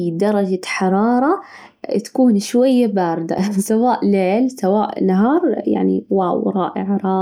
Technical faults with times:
3.38 block of digital silence

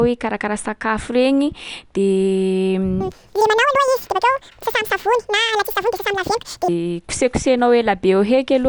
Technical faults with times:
3.01-6.68 wrong sample rate

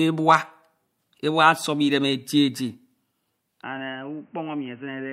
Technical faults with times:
3.63-5.12 input switched to a poorer device

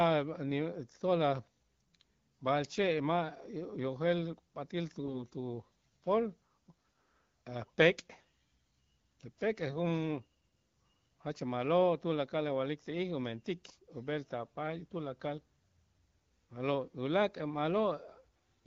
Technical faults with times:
5.00-5.23 AMR bit errors

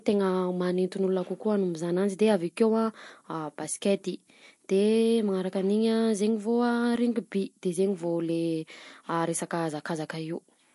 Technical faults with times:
0.00-10.75 low bit depth with noise shaping
0.00-10.75 MP3 compression

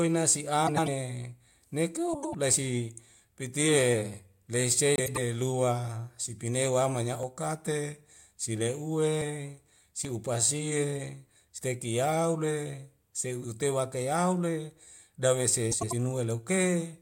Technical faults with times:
0.67-0.88 frames out of order
2.13-2.35 frames out of order
4.96-5.18 frames out of order
7.23 dropped buffer (overrun)
10.05 dropped buffer (overrun)
11.58 dropped buffer (overrun)
13.44 dropped buffer (overrun)
15.71-15.93 frames out of order

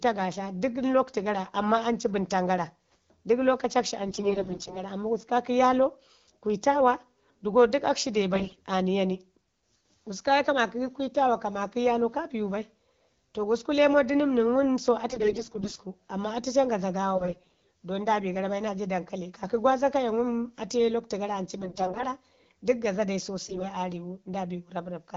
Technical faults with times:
4.07-4.83 AMR bit errors
8.33-8.60 AMR bit errors
15.09-15.80 AMR bit errors
17.16-17.59 AMR bit errors
21.58-22.04 AMR bit errors
23.45-23.67 AMR bit errors

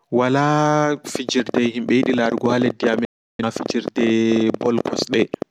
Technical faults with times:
1.15-5.43 train of clicks
3.05-3.44 digital broadcast dropout

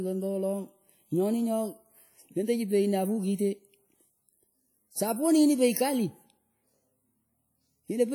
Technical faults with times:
0.00-8.14 WMA compression

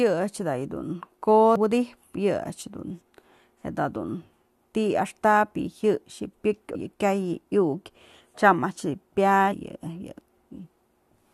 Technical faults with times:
1.56 damaged data in a compressed stream
6.74 damaged data in a compressed stream
9.51-9.53 damaged data in a compressed stream

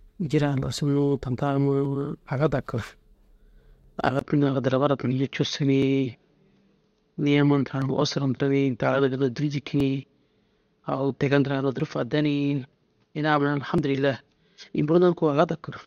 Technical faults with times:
1.85 overlap between stream segments
3.84 overlap between stream segments
4.19-15.87 input switched to a poorer device
5.82 overlap between stream segments
7.82 overlap between stream segments
9.80 overlap between stream segments
11.80 overlap between stream segments
13.78 overlap between stream segments

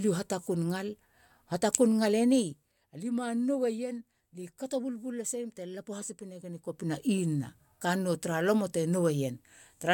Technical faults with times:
none

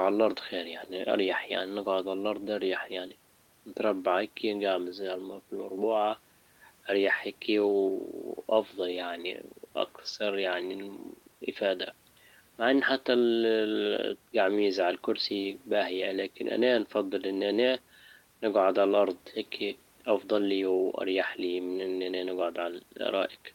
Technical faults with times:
none

